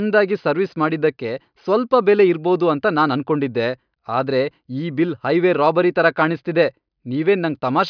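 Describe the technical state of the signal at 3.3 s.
At 3.3 s the speech signal is intact, with no audible technical fault at that point.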